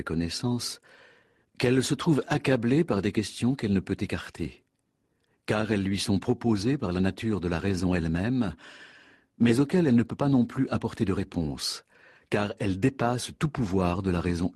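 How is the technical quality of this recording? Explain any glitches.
No glitches or faults heard.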